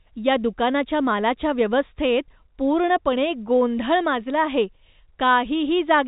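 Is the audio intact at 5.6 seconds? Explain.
Yes, the speech at 5.6 seconds comes through intact, carried on a G.711 telephone coding path that confines it to the narrow telephone band below 4 kHz.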